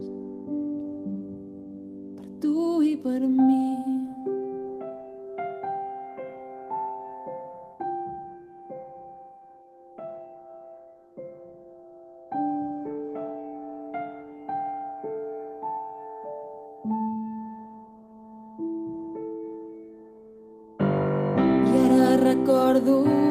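No audible technical faults turn up anywhere in the recording.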